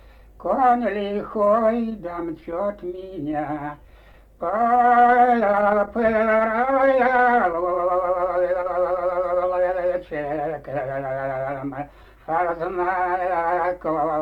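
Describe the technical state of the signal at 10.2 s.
At 10.2 s the signal is intact, with no audible fault at that moment.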